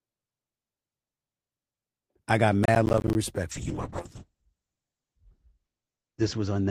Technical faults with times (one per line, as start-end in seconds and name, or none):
2.64-3.15 processor overload crackle
3.52-6.71 call bitrate drop